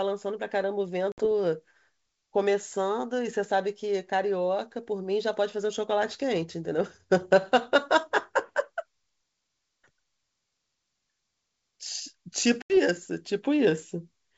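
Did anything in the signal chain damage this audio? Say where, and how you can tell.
Yes: hard-edged silent holes near 1.12–1.26 s (60 ms) and 12.62–12.75 s (80 ms), with slightly distorted speech on resumption, show packet loss on an ADPCM call, a network fault that desynchronises the decoder's predictor.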